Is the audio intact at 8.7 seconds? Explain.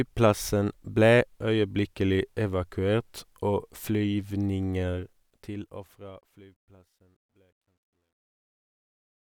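No. At 8.7 s the sound is inside truncation distortion on a fade, which runs from 4.94 s to the end at 9.31 s and is worst from 6.69 s onward. The fade-out starting around 5 s is smooth in shape, but the gain stage drops low bits without dither, consistent with about 12-bit resolution. At this level the waveform collapses into a few square steps, heard as gritty. A spectrogram shows harsh broadband grain.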